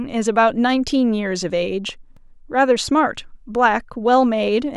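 At about 2.17 s there's a block of digital silence: the audio drops straight to silence for roughly 2.7 ms and then comes straight back, with no fade on either side. That length fits a 128-sample block at 48 kHz, so it points to an output buffer that wasn't filled in time. Because the gap is so short and the edges are hard, it comes across as a single sharp tick in the speech.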